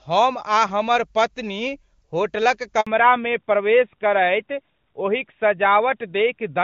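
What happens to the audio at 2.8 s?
At 2.81 s the speech cuts out in a handover gap lasting 60 ms, to 2.87 s. The call is being passed between networks. No speech frames arrive during the switch. The sound dies away quickly and stays silent until the new link begins.

From 2.87 s to the end there is a fallback to narrowband. The call drops from HD Voice, which sounds like high-rate AMR-WB, to a narrowband AMR codec. Nothing above 4 kHz survives. The speech turns duller and rougher.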